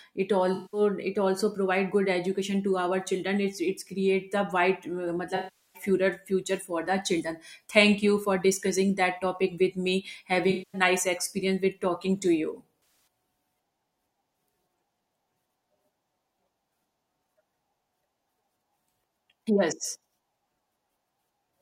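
AAC frame loss with concealment occurs four times. From 0.54 to 0.81 s, 192 ms of audio is missing. From 5.36 to 5.82 s, 384 ms is missing. From 10.50 to 10.81 s, 235 ms is missing. From 12.80 to 13.23 s, the losses are scattered, with the longest run about a tenth of a second. The decoder covers each gap by rebuilding sound from the last good spectrum. Each patch sounds smeared, noisy or phasey.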